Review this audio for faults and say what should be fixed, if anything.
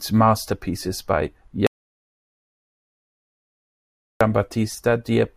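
There's an audio dropout to silence from 1.67 to 4.21 s. The speech cuts to silence with no room tone, likely a lost input while recording continued. Secure cables and check mutes beforehand.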